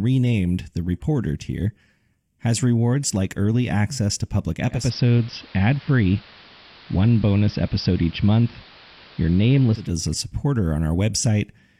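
At 4.69 s the receiver loses its digital stream and makes a 233 ms digital radio blending to analogue, crossing to the AM broadcast. The level shifts about 2 dB, and hiss sits roughly 25 dB down until the return at 9.96 s.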